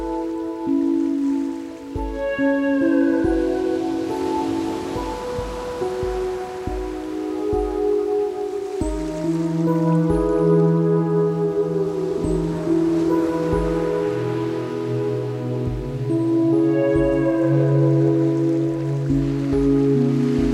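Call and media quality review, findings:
No audible faults found across the recording; nothing to flag for any component.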